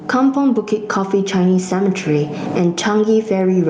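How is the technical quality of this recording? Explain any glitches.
The recording has one fault, audible across the whole clip: gain pumping. The input gain is likely set far too high, so a fast limiter clamps down on each loud syllable and lets go in the pauses. The gain swings by about 15 dB, which leaves loud and soft passages squashed close together. The call codec path, with its top end cut around 12 kHz, adds its ordinary coding texture on top.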